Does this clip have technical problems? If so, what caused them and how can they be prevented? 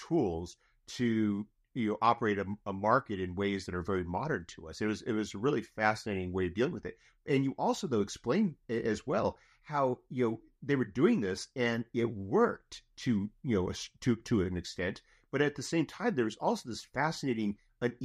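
No, this clip has no technical problems.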